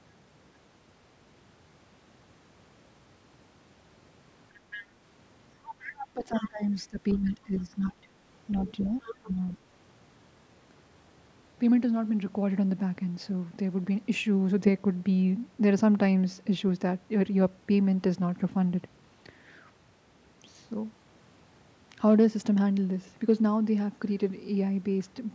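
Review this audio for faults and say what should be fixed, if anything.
A faint second voice, roughly 15 to 20 dB under the talker, surfaces at 4.71–4.83, 5.64–6.70, 7.09–7.34 and 8.52–9.54 s. This is the other side's voice leaking through, likely loudspeaker echo the canceller left in the microphone signal. Better acoustic isolation or a headset, plus stronger residual echo suppression, would prevent it.

The talker's voice sinks by roughly 15 dB from 6.11 to 8.06 s and by roughly 20 dB from 9.2 to 9.6 s. This is speech suppressed in double talk, likely the canceller ducking everything while both sides spoke. A canceller with more robust double-talk detection would prevent it.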